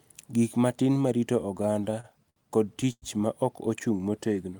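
From 1.57 to 2.38 s, packets kept arriving behind schedule and the jitter buffer ran dry seven times, causing repeated stalls (stutter). The receiver bridged each gap by extending the last sound, 146 ms in all, the longest hold 64 ms. Nothing is lost, but the speech drags and stutters.

At 2.92 to 3.04 s comes a short stall from a late packet: one packet was 95 ms behind, so the buffer emptied and the receiver stretched the preceding sound by 95 ms before resuming where it left off. A sound is held too long, with a faint buzz or dip.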